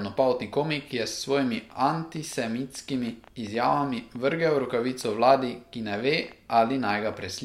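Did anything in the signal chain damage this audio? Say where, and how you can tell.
Yes. A train of clicks from 1.70 to 7.29 s, roughly forty irregular ticks at 6.8 per second and as loud as the speech, likely comes from analogue-wiring interference.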